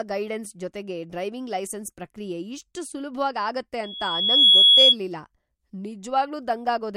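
At 3.83 s a loudspeaker feedback squeal starts: the microphone is picking up its own loudspeaker, and at 3.4 kHz the loop gain passes unity, so that frequency reinforces itself. A thin whistle swells over about three-quarters of a second to roughly 15 dB above the speech and holds until 4.96 s. On a spectrogram it is a bright horizontal line at 3.4 kHz; the waveform envelope balloons into a dense, steady band.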